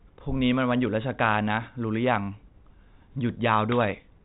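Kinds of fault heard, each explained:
No kinds of fault are heard in this speech.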